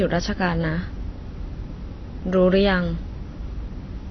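From start to end, the speech carries plainly audible AAC compression, likely from AAC-LC at a low rate fitting about 24 kbps. Nothing survives above 6.4 kHz, so a spectrogram shows a flat ceiling there, and sibilants sound dull, smeared and warbling.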